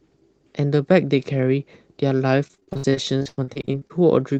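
Speech, carried over a WebRTC-style call path whose Opus-type coding caps the top end near 12 kHz. From 2.47 to 3.92 s there is repeated packet loss, and the voice turns robotic. About twenty holes fall in that stretch. The longest lasts 100 ms. Each hole is filled by stretching the last good sound forward, so roughly 40 percent of the span is concealment. The result is choppy speech with pieces missing.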